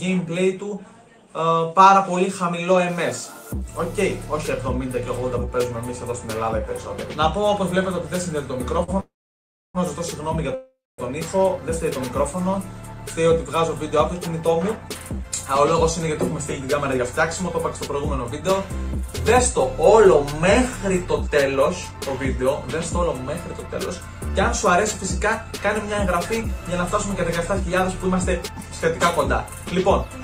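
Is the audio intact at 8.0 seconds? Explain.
Yes, the audio is intact at 8.0 seconds, with no fault to be heard at that moment.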